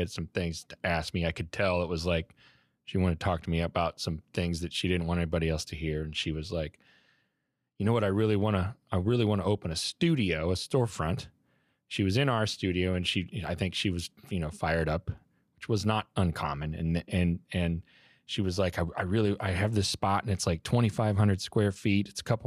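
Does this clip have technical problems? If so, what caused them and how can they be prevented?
No, there are no technical faults to report in this recording, so nothing needs preventing.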